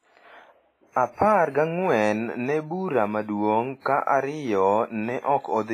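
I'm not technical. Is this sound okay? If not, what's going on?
No. The speech sounds watery and ringing throughout, with a hiss that swells and fades along with it, and nothing above 15.4 kHz. That is heavy damage, most likely from WMA compression, a squeezing method that discards detail to make small files.

There is also pre-echo at 0.91 s and 3.81 s: a brief hiss lasting about 48 ms just before a sharp sound, which then starts softly instead of crisply. The compression spreads its noise across long chunks of time, so the noise leaks into the quiet moment before the sudden sound.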